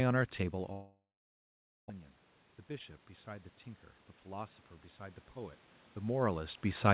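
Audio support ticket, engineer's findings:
Gap at 0.72 to 1.92 s: last sound smeared into a fading buzz, then about 0.83 s of dead air, and speech resumes with roughly a second missing. Likely a long network dropout, receiver concealing then giving up.

Hurried stretch at 1.99 to 3.06 s: speech runs at 108% speed, pitch unchanged. Jitter buffer speed-up, with the receiver clipping out pitch periods to drain roughly a tenth of a second of excess buffering after the dropout.

Slow swell from 4.24 s to the end at 6.94 s: speech and room noise rise together. Automatic gain rising, with AGC chasing an input that fell about 18 dB and lifting its gain gradually to compensate.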